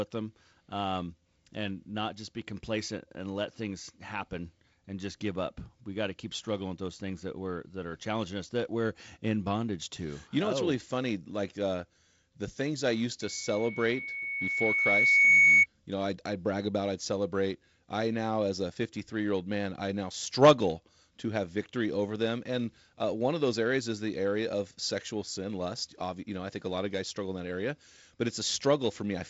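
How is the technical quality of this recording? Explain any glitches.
A single glitch stands out, with the band limit near 7.7 kHz pointing to G.722 wideband coding. From 13.21 to 15.66 s, just after "the things I used", loudspeaker feedback squeal appears. The microphone hears its own loudspeaker, and the loop gain passes one at 2.2 kHz. That tone swells over roughly two seconds to about 15 dB above the speech.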